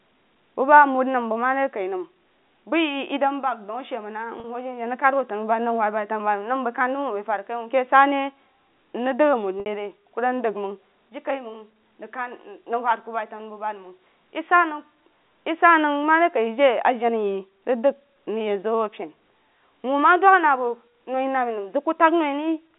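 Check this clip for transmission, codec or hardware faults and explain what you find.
Two brief dropouts occur in this G.711 telephone speech, whose line band runs from 200 Hz to 3.7 kHz.

Packet loss with pitch repetition, at 4.40 to 4.44 s (40 ms) and 9.60 to 9.66 s (60 ms): the receiver loops the last pitch period across each gap, so the sound briefly holds as a buzzy tone. The gap lengths fit two and three lost 20 ms packets.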